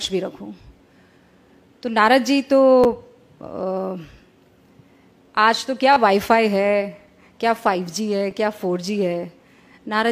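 Playback fell behind three times, so the device replayed its last buffer, a repeated buffer fault. Each repeat lasts about 10.7 ms, which fits a 512-sample buffer. Single repeats at 2.84 s and 8.31 s give brief clicks, and a triple repeat from 5.93 to 5.96 s gives a short buzzy stutter that loses roughly 30 ms of audio.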